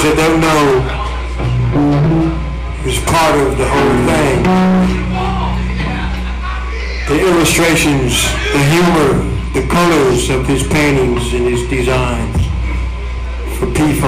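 The whole clip suffers hard clipping. It's driven roughly 23 dB past what the stage can pass, so nearly a third of the samples sit flat against the ceiling. Those squared-off peaks throw harmonics way up top, giving a harsh fuzz on every loud moment.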